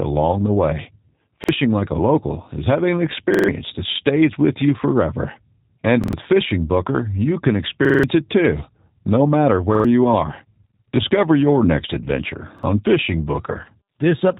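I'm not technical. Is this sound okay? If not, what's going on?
No. Throughout, the speech sounds slightly rough, muffled and synthetic because of the G.729 codec, a phone-call compression that rebuilds speech from simplified parts and drops everything above about 3.8 kHz. At 1.44, 3.34, 6.04, 7.85, 9.75 and 12.59 s there are short stutters, a repeated buffer. New audio arrived late, so the same slice of about 46 ms replayed up to four times. The first comes after "the way" and the fifth after "it too no matter".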